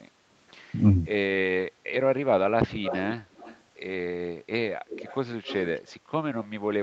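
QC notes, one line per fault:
2.82–3.16 s, 3.35–3.59 s, 4.88–5.17 s, 5.45–5.78 s, echo leak: likely a far-end echo canceller letting loudspeaker pickup through, so a copy of the speech follows 0.25 s later, about 10 to 25 dB down.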